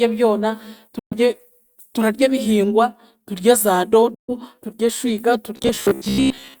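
At 0.99 s the speech cuts to silence until 1.15 s. This is a Bluetooth dropout. Packets likely reached the headphones too late and were discarded. The sound returns further along, as if it had kept playing underneath.

The same dropout recurs from 4.14 to 4.33 s, just before "turye eshwiga". About 0.14 s of audio is missing, which fits nine or so lost packets.

From 5.57 s to the end, just after "turye eshwiga", the speech turns into robotic sound from repeated short buffers. Audio likely arrived too seldom, so the player looped the last slice instead. Most of this stretch is repeats. They impose a fixed 66.7 Hz buzz, which points to a loop of roughly 15 ms. The result is metallic and rigid but still tracks the speech loosely.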